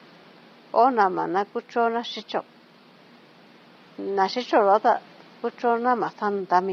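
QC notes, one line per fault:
Throughout, low-delay AAC compression: the speech sounds rough and grainy all the way through, with noise filling the gaps between harmonics and a thin, synthetic top end. The likely cause is AAC-ELD at around 24 kbps, whose short frames can't resolve pitch detail well at that rate. The room noise sits about 29 dB under the speech.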